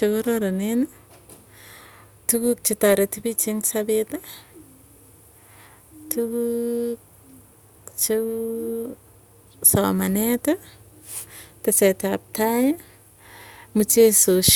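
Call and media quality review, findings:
No audible faults found in this speech recording.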